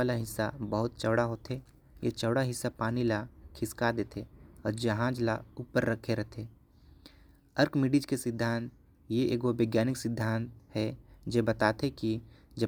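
Listening to this speech recording, nothing stood out as a technical problem at any point.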